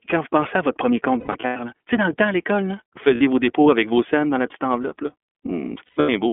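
The whole clip passes through the iLBC codec, with speech held to a telephone band of roughly 250 Hz to 3.4 kHz. Its plainly audible coding damage, consistent with 30 ms frames at a rate near 13.3 kbps, leaves the speech slightly rough and synthetic.

Lost iLBC frames follow. From 1.2 s to 1.57 s, 240 ms of audio drops out in scattered runs of up to about a tenth of a second. The decoder fills each gap by repeating the last pitch cycle with added noise, which sounds like a held, buzzy vowel. A brief 60 ms loss at 3.15 to 3.21 s gives a short held vowel. From 5.85 s to 6.09 s, 210 ms is lost across that span, with the same droning fill and clean recovery after each run.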